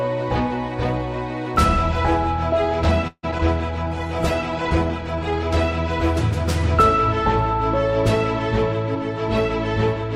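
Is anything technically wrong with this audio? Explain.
Yes, there are four faults, all near the 3 s mark.

From 3.07 to 3.25 s there is a call audio freeze. Packets were likely delayed until the jitter buffer ran dry, so the last sound is stretched into a fading buzz and then about 50 ms of silence. Playback then resumes where it stopped. Unlike a dropout, nothing is lost; a 157 ms gap has simply been inserted.

Around 3.31 to 3.34 s, short concealed packet loss leaves a brief smear. About 20 ms never arrived, and the decoder patched the hole by extending the preceding sound. It is shorter than the freeze, with no silent gap.

At 3.38 to 3.41 s comes a skip ahead. Around 70 ms was discarded because later audio was already queued, so the sound jumps forward with a near-seamless join. Here material is missing, where the freeze added time.

From 3.64 to 5.48 s there is a call bitrate drop. 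The encoder fell from 128 to 16 kbps and stayed at the bottom for 1.7 s. The sound turns rough and muffled as the highs are cut. This is a sustained change in tone rather than a momentary glitch.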